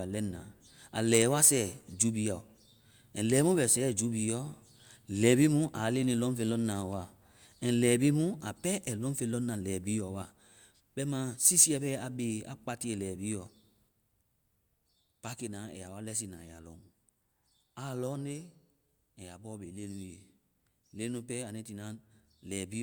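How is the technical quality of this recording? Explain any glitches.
The recording has no audible technical glitches: the signal holds steady throughout without any breaks, distortion or other disturbances.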